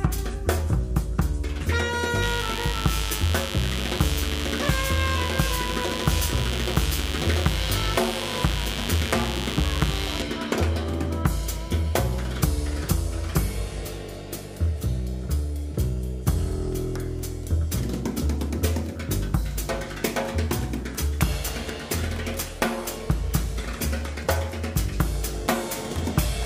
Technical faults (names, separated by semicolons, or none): mains buzz